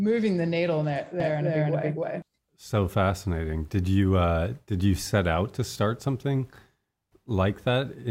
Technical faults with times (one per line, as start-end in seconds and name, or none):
1.20-2.22 doubled audio track